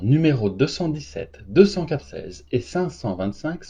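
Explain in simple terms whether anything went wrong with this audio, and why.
Yes. Just after "deux cent", around 1.98 to 2.04 s, compressed frames were skipped: about a third of a second of speech vanishes, which fits seven frames of about 43 ms each. Unlike a dropout, there is no silent gap; the speech just jumps ahead.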